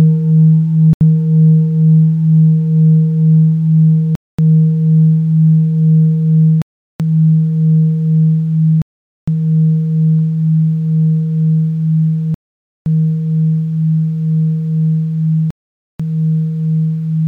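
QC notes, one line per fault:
0.93–1.01 s, 4.15–4.39 s, 6.62–7.00 s, 8.82–9.28 s, 12.34–12.86 s, 15.51–16.00 s: Bluetooth stall. The sound cuts to full silence for 78, 233, 381, 457, 517 and 491 ms, then resumes abruptly. Likely cause: radio interference delayed packets, the headphones' buffer ran empty, and playback halted until retransmitted data arrived.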